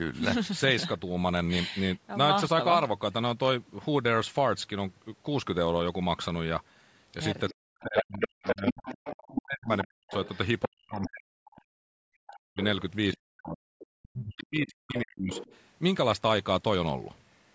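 From 7.49 to 11.62 s the other side's voice leaks through at roughly the main talker's level, likely residual loudspeaker echo the canceller failed to remove. Quieter leaks follow at 12.63 to 13.17 s and 14.7 to 15.57 s. Speech is suppressed in double talk at 7.59 to 10.13 s, 10.66 to 12.61 s and 13.14 to 15.32 s, dipping deeply in pieces, likely the canceller ducking both voices during overlap.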